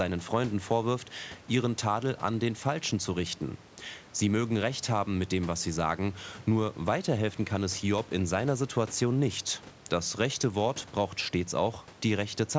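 No faults in the speech; the room's background noise sits about 22 dB below it, and the call microphone processing leaves nothing above 8 kHz, both as expected.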